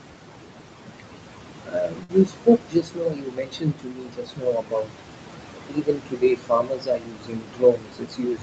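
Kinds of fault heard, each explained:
Noise suppressor artifacts: Throughout the clip the suppressor pulls down the bands it judges to be steady noise, about 21 dB. The room noise, only about 8 dB below the speech, pumps down in pauses and back up under speech.
Speech cut by the noise suppressor: The suppressor mistakes parts of the speech for noise and attenuates them with the background, by up to about 22 dB. This happens from 1.62 to 5.02 s, roughly three seconds of affected material, and again from 5.69 s to the end, where parts of the speech sound swallowed or faint.
Short stall from a late packet: At 2.03 to 2.11 s a packet arrives late and the jitter buffer runs dry. The receiver holds the preceding sound for 56 ms rather than dropping anything, so nothing is lost, but that sound lingers unnaturally with a slight buzz or dip, and playback resumes 56 ms later.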